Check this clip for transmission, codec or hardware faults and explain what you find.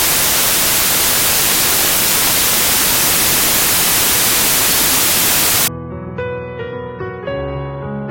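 One fault is present: samples built from the wrong bytes, running from the start of the clip to 5.68 s. Over that span the reader assembles each sample's bytes incorrectly, through a one-byte offset, swapped byte order or a mismatched alignment. The rapidly varying low-order bits end up in the most significant position of every value, so the sound is replaced by loud, harsh broadband noise that is close to white on the loud passages.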